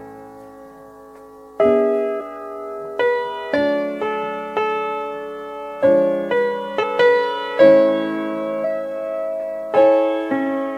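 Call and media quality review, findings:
Compressed frames skipped at 2.20 s, 6.82 s and 8.63 s: audio jumps ahead about 150 ms, 300 ms and 400 ms. Decoder dropping missing or damaged frames. Spectrogram shows an abrupt content discontinuity at each join.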